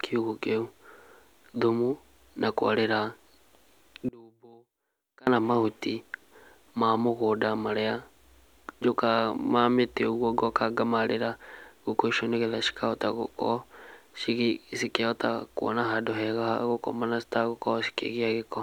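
From 4.09 to 5.27 s, one channel inverted is the likely cause: one side of the stereo pair flips polarity, so the shared centre content cancels when summed to mono. The speech drops by about 30 dB, leaving only a faint residue before recovering.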